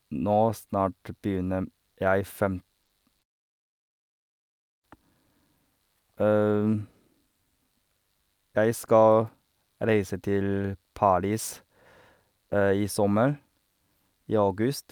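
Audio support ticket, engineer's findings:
Short concealed packet loss, just after "m jeg fem": brief smear and wobble at 2.83–2.91 s (two back-to-back holes) and again at 3.19–3.23 s. Receiver jitter buffer and decoder concealment. Missing stretches were filled by continuing the preceding sound, from its pitch if voiced or as shaped noise if not, then blended back, which fits 20 ms frames. Not a hard dropout: there's no silent gap or sharp click, just a continued, blurred sound.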